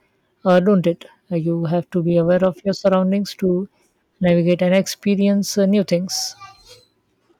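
A stage in the chain is being driven past its ceiling, so the speech peaks are cut flat, which is hard clipping. From 0.49 to 0.87 s the overload is about 4 dB, heard as crackle on the peaks. Just after "have to be", from 2.30 to 2.46 s, about 1 dB gives brief crackle, then 2.86 to 2.94 s at about 2 dB, and 4.28 to 4.79 s at about 1 dB, each adding harsh upper harmonics.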